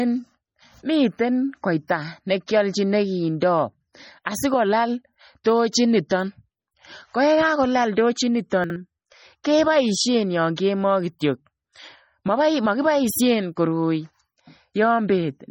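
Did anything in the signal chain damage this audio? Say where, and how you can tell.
Yes, at two stages.

At the codec stage, the whole speech clip sounds watery and swirly, with metallic chirps on sibilants and smeared consonant onsets, and nothing is present above 18.9 kHz. That is heavy transform-codec damage, likely from MP3 encoding at a low bitrate around 32 kbps. Weak spectral lines are starved of bits and switch on and off from frame to frame, and the treble is cut at a fixed point. A plain low-pass filter would dull the sound without the swirl.

The same codec causes pre-echo at 6.08 to 6.11 s, just after "sikolaal tochiit". A short hiss of about 28 ms runs ahead of a sharp onset, which sounds softened. The attack sits late in a transform block, and the quantisation noise sized for the loud part spreads backward into the quiet moment before it. Reverb or a room reflection would trail after the attack rather than lead it.

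At the network or storage stage, chunks play out of order at 8.64 to 8.76 s, just after "kakolal tochiit". The sound briefly jumbles at hard joins. This fits 60 ms chunks where one arrives or is written late and plays after the chunk that should follow it. No audio is missing and nothing repeats, which rules out a dropout or a stutter.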